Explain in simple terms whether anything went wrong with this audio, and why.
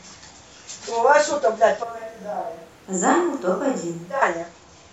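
From 1.84 s to 4.22 s the speech suddenly turns hollow, quieter and noisier, then snaps back: likely a switch to a distant microphone.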